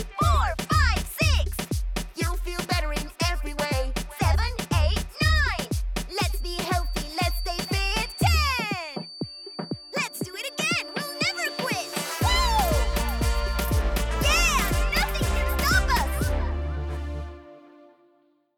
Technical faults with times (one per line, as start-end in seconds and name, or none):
6.04-13.69 feedback whistle